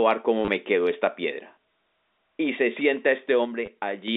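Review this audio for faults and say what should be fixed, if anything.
Packet loss with last packet repeated occurs twice. At 0.45 to 0.48 s, just before "me quedó esta", 30 ms of sound is filled by replaying the previous packet. At 3.66 to 3.68 s, after "se sienta", 20 ms is filled the same way. Each gap suggests 10 ms packets. The repeats give a brief robotic stutter with a buzz near 100 Hz. A larger jitter buffer with proper concealment, or forward error correction, would prevent this.

One channel drops out from 3.45 to 4.08 s, right after "se sienta". The centred sound falls abruptly by about 6 dB in the mono sum and then recovers. This points to one stereo channel going silent. Secured cabling and a per-channel level monitor would catch it.

The telephone path, which fits G.711 A-law limited to about 250 Hz to 3.7 kHz, is not a fault and needs no fix.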